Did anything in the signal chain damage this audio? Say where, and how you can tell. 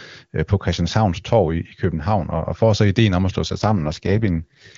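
Yes. An AMR rate drop at the network stage: after "ideen om at slå", 3.47 to 4.77 s, speech turns raspy as AMR-WB falls from 23.85 to 6.6 kbit/s. Bandwidth holds with no gap, unlike packet loss.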